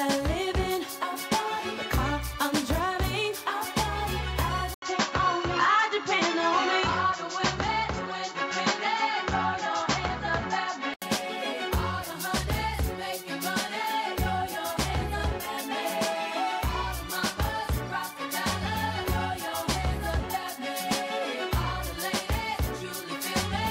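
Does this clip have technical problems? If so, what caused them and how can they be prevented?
Yes. From 4.74 s to 11.02 s the sound turns dull, with nothing above 7.6 kHz, an 80 ms gap at the 4.74 s switch, a new noise floor roughly 50 dB down and little level change. This is likely an input switched to a poorer device, clearing again at 11.02 s. To prevent it, lock the recording input to one device and disable automatic switching to headsets or call profiles.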